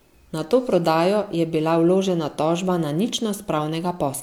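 Nothing here sounds broken: the speech comes through steady and intact, with no technical faults to point to at any moment.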